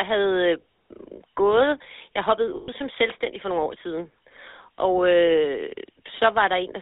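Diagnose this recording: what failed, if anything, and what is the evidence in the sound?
The codec stage is the weak point: the whole recording has passed through the GSM full-rate codec, whose damage is plainly audible. The coder reduces the speech to a vocal-tract filter fed by a sparse, regularly spaced pulse excitation, which fits a 13 kbps full-rate stream. That simplified excitation gives the speech its buzzy, gravelly grain. The line band sits at roughly 300 Hz to 3.7 kHz, so the low body and all high-frequency detail are missing.

At the network or radio link, lost GSM frames interrupt the speech from 2.56 to 2.69 s, between "gået jeg hoppede" and "som selvstændig for nogle". The gap lasts about 120 ms, which fits a run of six 20 ms frames going missing. The decoder conceals the loss by repeating the parameters of the last good frame, so the speech turns into a rough, metallic ringing tone before normal speech resumes.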